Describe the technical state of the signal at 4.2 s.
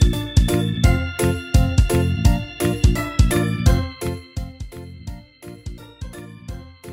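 At 4.2 s the gain is being lowered in unsmoothed 2 dB steps, roughly ten per second, for a drop of about 15 dB. This is zipper noise, running from 3.76 to 4.61 s: each jump clicks, so a ticking rides on the fading sound.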